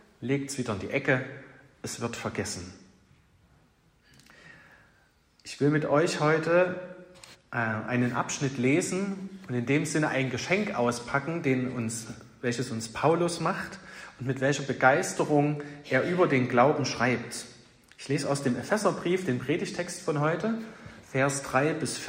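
No technical faults can be heard anywhere in the recording.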